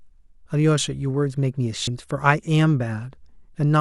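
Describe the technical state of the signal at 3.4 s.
At 3.4 s the speech signal is intact, with no dropout, distortion or other fault audible at that point.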